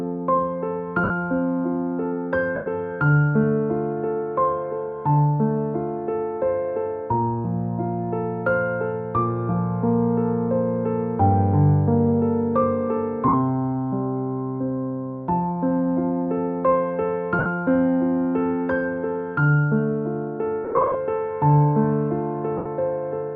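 Lost LE Audio frames at 1.04, 2.55, 13.28, 17.39 and 22.57 s (about 50 to 105 ms each), and scattered across 20.64 to 20.95 s. At each, the LC3 decoder recycled the last spectrum with scrambled signs, smearing the sound into brief noisy hiss.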